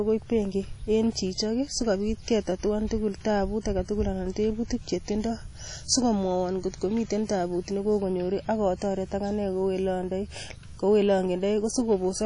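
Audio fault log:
Throughout: WMA compression. The speech rings and sounds washy, with hiss that breathes with the signal. Nothing is heard above 10.1 kHz. The likely cause is a transform codec smearing quantisation noise across long blocks, at a rate that fits 32 kbps.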